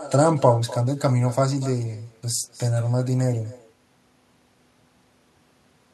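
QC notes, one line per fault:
Throughout: echo with no canceller. The far end's loudspeaker feeds its microphone unchecked, so each phrase returns about 18 dB down, roughly a fifth of a second later, and thinner.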